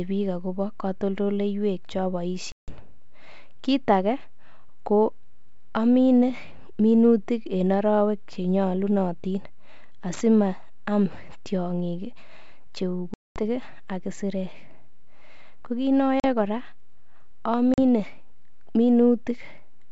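Packet loss on an ADPCM call strikes at 2.52 s, after "biik agobo kotoltoleiywek ch", leaving a 160 ms hole. It strikes again at 13.14 s for 220 ms, before "ak isirek", then at 16.20 s after "kiit ne" and at 17.74 s, 40 ms each. The gaps are hard-edged silence. Afterwards the G.722 decoder's adaptive predictor and step size no longer match the sender's, so the speech resumes slightly distorted, settling within tens of milliseconds.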